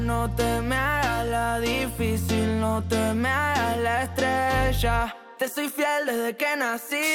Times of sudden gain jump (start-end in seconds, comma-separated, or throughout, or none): none